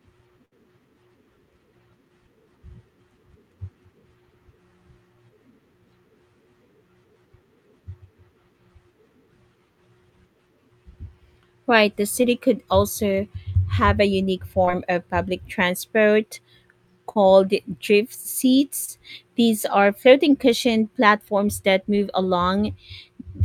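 Near the start, from 0.45 to 0.53 s, the speech turns briefly into a held buzz or fading hiss before jumping ahead. This is a burst of packet loss: about 60 ms never arrived, and the receiver stretched the last sound across the gap before playback resumed further on.

Later come five brief smears or wobbles, at 12.21, 14.65, 17.13, 18.85 and 21.96 s, each a short concealed packet loss. Around 20 ms of audio went missing each time, and the decoder patched roughly 15 to 26 ms by extending the preceding sound, then blended back into the real signal.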